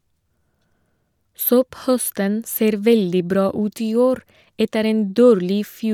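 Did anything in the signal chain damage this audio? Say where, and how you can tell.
No, no signal-chain damage audible.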